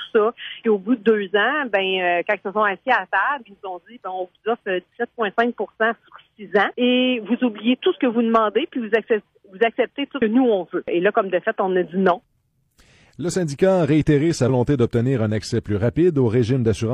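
The audio has compressed frames skipped at 10.17–10.22 s and 14.45–14.50 s. It jumps ahead by roughly 150 ms and 100 ms, consistent with whole 46.4 ms frames dropped.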